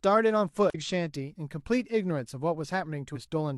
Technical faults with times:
0.70-0.76 damaged data in a compressed stream
3.11-3.16 damaged data in a compressed stream

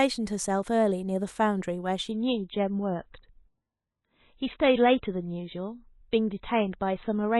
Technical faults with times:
2.11-7.40 adaptive stream at a lower bitrate

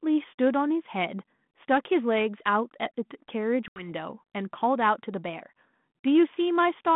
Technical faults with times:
3.68-3.87 packet loss on an ADPCM call

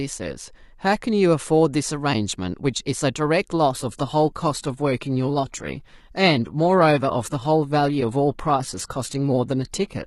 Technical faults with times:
3.73-10.06 adaptive stream at a lower bitrate

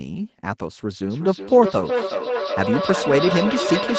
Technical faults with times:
1.10-3.98 feedback echo between two devices

